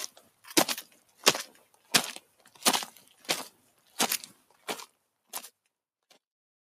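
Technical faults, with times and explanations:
throughout: noise suppressor applied to music or sounds. A speech-tuned suppressor treats steady tones and tails as noise, so its gain swings by roughly 15 dB. Unlike compressor pumping, the dips follow how steady the sound is, not how loud it is.
0.16–0.44, 0.93–1.20, 1.64–1.91, 2.21–2.48, 3.51–3.96, 4.34–4.67 s: sound cut by the noise suppressor. Each dip lasts about 0.3 s (about half a second at 3.51) and goes as deep as about 7–8 dB. The sound dims rather than vanishing, and onsets still get through, which separates these dips from dropouts.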